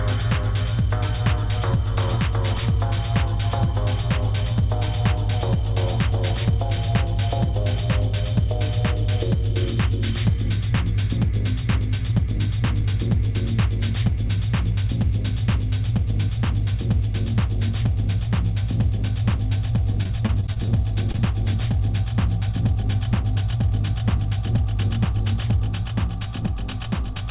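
From 19.92 to 20.70 s the stream suffers repeated packet loss, giving a robotic sound. Packets kept failing to arrive in time, and the receiver patched each hole by extending the last stretch of sound before the next one opened. The choppiness suggests about eight separate holes, none longer than 23 ms. About 100 ms of real audio is gone, and roughly a fifth of the span is synthetic fill. The result is a stuttering, robotic texture with fragments missing.

At 21.12 to 21.16 s a short stall from a late packet follows. A packet was overdue, the jitter buffer ran dry, and the receiver held the current sound for about 25 ms until the packet showed up. Playback then resumed exactly where it left off. Nothing is lost, but that moment lingers slightly too long, with a faint buzzy sustain.

Immediately after, from 21.16 to 21.20 s, there is a short concealed packet loss. About 20 ms of audio never reached the decoder, and the gap was bridged by continuing the preceding sound before blending back into the real signal. 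It comes across as a brief smear or wobble right on the heels of the stall. Throughout, the call path cuts everything above 4 kHz, which fits a narrowband G.711 A-law link at 64 kbps.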